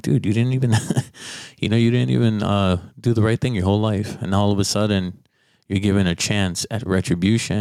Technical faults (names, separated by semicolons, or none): gain pumping